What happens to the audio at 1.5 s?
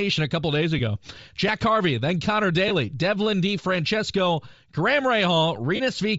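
A repeated buffer hits at 1.48 s: a piece of audio about 5.8 ms long, which fits a 256-sample buffer, plays once more because fresh samples arrived late, and a few milliseconds of the real signal are skipped. With so small a buffer it comes across as a sharp click or tiny buzz rather than a stutter. The waveform shows a copied short segment with abrupt discontinuities at its joins, and the spectrogram shows a thin vertical broadband streak.

Under that, the same moment carries a grainy, breathy edge in the upper band, with noisy, smeared texture where fine high-frequency detail should be. The likely cause is Bluetooth LC3 compression running at about 32 kbps with 7.5 ms frames, where much of the upper spectrum is discarded and replaced with noise fill. On a spectrogram the top region looks speckled and patchy, with blocky structure repeating on a 7.5 ms frame grid.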